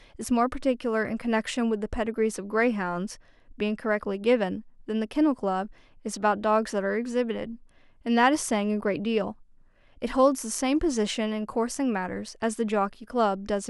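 A gritty, inharmonic fizz rides on the speech from 1.67 s to 6.70 s, clinging to the louder and brighter sounds and then vanishing. It is the mark of crude rate conversion: the samples were linearly interpolated to a new rate with no anti-aliasing filter, a pattern that fits a 48 kHz to 44.1 kHz change. The repeating interpolation error folds into tones unrelated to the voice, sitting roughly 45 dB below it.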